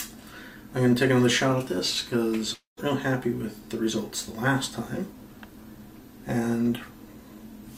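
From 2.53 to 2.80 s the sound turns into a fading, buzzy continuation of its last moment, then drops to near silence for about 130 ms before resuming with about 240 ms of audio gone. This is a long network dropout, likely from lost packets the receiver tried to cover over.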